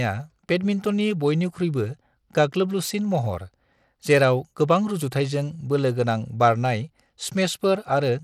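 Across the whole speech clip, the treble flickers and drops out, and a gritty, grainy noise rides on the sound. This is likely Bluetooth SBC compression, which fits a low bitrate near 96 kbps. Its upper sub-bands get few bits, and the rest are coarsely quantised.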